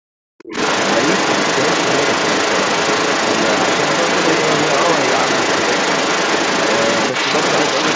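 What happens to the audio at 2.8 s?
At 2.8 s, a second voice comes through over the talker. This is the other side's voice leaking through, from 0.38 s to the end. It is about 5 dB louder than the main speech. The likely cause is a loudspeaker echo that the canceller left in the microphone.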